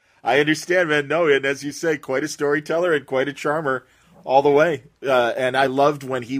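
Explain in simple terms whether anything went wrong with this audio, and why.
Listening to the speech recording, nothing went wrong that could be heard; no moment stood out as a problem.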